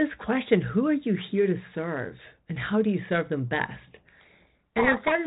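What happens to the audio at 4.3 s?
A codec payload misread runs from 4.2 s to 5.13 s, covering 4.3 s. The G.726 code words arrive with their bits in the opposite order to what the decoder expects, so each ADPCM difference value is misread and the adaptive predictor is driven off course. The speech is buried under harsh, gritty distortion for the whole span, replacing the lightly coded 32 kbit/s telephone-band sound heard before it, until the packing matches again.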